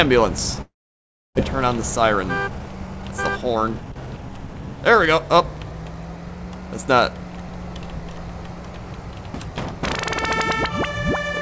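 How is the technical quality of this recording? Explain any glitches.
The recording has several clear glitches: four short skips, one long gap filled by concealment, and a stretch that plays audibly fast. It was carried over a call path using G.722 at 64 kbps, whose band limit of about 7 kHz caps the spectrogram's upper edge throughout.

Dropped buffer (overrun) at 0.38, 5.57, 7.49 and 9.34 s: each time the audio jumps ahead, losing roughly 70 ms. The likely cause is that the capture side fell behind and a buffer was overwritten before it was read, so the sound on either side is spliced directly with no gap. On a waveform this shows as an abrupt discontinuity in shape. On a spectrogram there is a thin vertical line where the content changes suddenly, often heard as a click.

Long network dropout from 0.62 to 1.39 s: about 0.4 s of audio never arrives. The receiver fills the gap by stretching the last sound into a buzzy, fading tone that decays toward silence. 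When audio resumes it has moved on, and the missing part is gone. The likely cause is a stall in packet delivery that shifted the delay by roughly 300 ms. On the spectrogram, smeared, repetitive harmonics fade into a dark band. The waveform shows a decaying envelope and then near-flat quiet.

Jitter buffer speed-up from 1.65 to 4.62 s: after the dropout the buffer holds extra delay. The receiver works that delay off, roughly 300 ms in total, by repeatedly removing short pitch-period pieces. Playback runs at about 110% speed with pitch unchanged, so it sounds hurried. On a spectrogram the events in this stretch appear compressed in time but keep the same harmonic spacing. The waveform shows tiny splice points scattered through the section.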